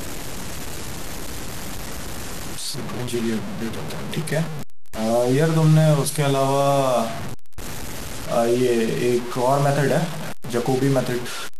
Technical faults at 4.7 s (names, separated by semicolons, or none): low bit depth without dither